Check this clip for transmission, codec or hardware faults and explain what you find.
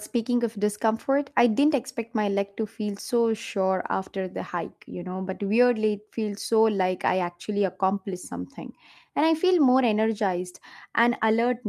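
No faults found, and nothing audible in the speech points to trouble anywhere along the chain.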